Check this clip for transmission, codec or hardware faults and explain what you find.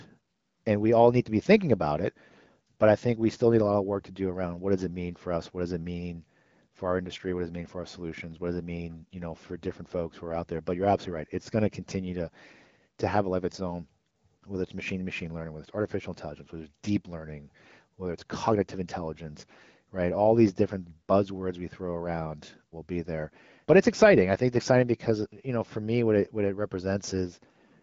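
Nothing here needs flagging; the speech comes through the AMR wideband (HD Voice) codec sounding clear and natural, with no glitches or dropouts to point to.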